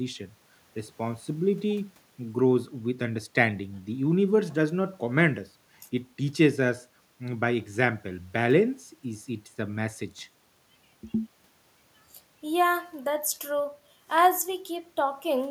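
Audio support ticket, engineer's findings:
No technical faults found in this speech recording. Nothing to escalate; ticket can be closed.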